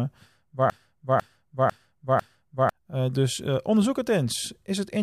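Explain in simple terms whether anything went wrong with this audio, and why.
The player or stream likely stalled and kept replaying its last half-second, a broken-record loop: from 0.70 to 2.69 s the speech repeats four times, replacing what should have played.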